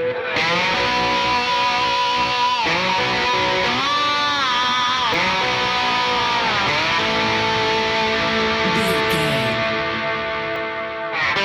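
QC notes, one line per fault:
3.64 s, dropped buffer (overrun): a sudden jump forward, about 70 ms of sound simply missing and the two sides butted together with no gap, likely from samples not being read before the hardware overwrote them.
5.14 s, dropped buffer (overrun): same thing but smaller, roughly 20 ms skips ahead, likely the same missed collection.
10.56 s, dropped buffer (overrun): another small skip of around 20 ms, likely one more overwritten buffer.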